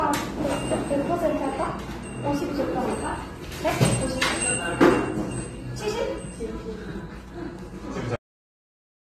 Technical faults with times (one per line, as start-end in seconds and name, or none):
0.00-9.03 low-bitrate audio saved at a high bitrate
8.16-9.03 cut-off end